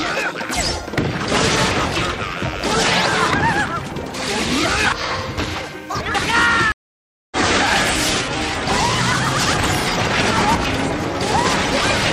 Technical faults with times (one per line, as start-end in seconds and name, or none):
6.72-7.37 stream reconnect